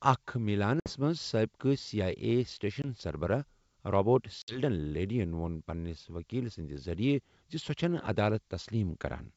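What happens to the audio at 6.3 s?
Nothing goes wrong at 6.3 s: the speech carries straight through that moment intact, with the clear, wideband sound of G.722 telephone coding that runs up to about 7 kHz.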